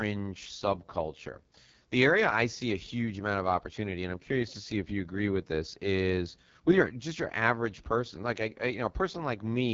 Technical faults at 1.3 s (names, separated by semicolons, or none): AMR wideband (HD Voice) codec